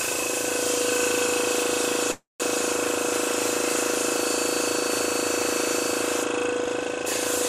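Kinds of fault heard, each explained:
Call audio freeze: from about 2.11 to 2.43 s the sound stalls. The last instant is stretched into a fading buzz that drops to silence for about 170 ms, then the audio resumes exactly where it stopped, with nothing lost and everything after pushed about 284 ms later. This is likely a jitter buffer running empty while packets were held up. A spectrogram shows smeared flat bands fading into a blank column, and the waveform shows a decaying tail, then a flat gap.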